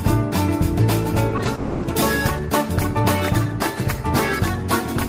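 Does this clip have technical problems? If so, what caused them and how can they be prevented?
Yes. Short concealed packet loss at 1.29, 1.37 and 1.43 s: each time about 20 ms of audio arrived too late. The receiver stretched the preceding sound across the gap and blended back, leaving brief smears. A larger jitter buffer or forward error correction would prevent these.

Long network dropout from 1.55 to 1.85 s: about 280 ms of the sound is replaced by a continued, fading fill, likely because a burst of packets never arrived. A steadier connection, such as wired instead of congested wireless, would prevent this.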